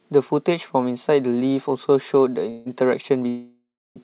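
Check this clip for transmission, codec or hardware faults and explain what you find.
Two call audio freezes, at 2.5 to 2.75 s and 3.28 to 3.98 s, both likely caused by packets stalling in transit until the jitter buffer ran dry. Each time, the receiver stretched the last sound into a fading buzz, about 155 ms in the first and about 673 ms in the second, which decays into roughly 320 ms of silence. The speech then resumes intact, only later. The narrowband call path, with nothing above 4 kHz, is audible throughout.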